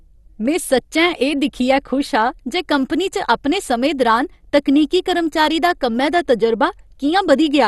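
All the way through, the speech sounds dull and gurgly, with nothing above 12.2 kHz. That's likely MP2 compression starving the upper sub-bands, which fits roughly 64 kbps.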